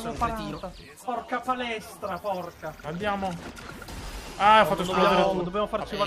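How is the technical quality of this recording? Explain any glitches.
The recording has one glitch, confined to a short stretch near the start.

Channel delay (comb filtering), 0.81 to 2.64 s: one channel arrives roughly 10 ms late, and when the channels combine, shared content cancels at evenly spaced frequencies, the first notch around 40 Hz. The sound turns hollow and phasey there.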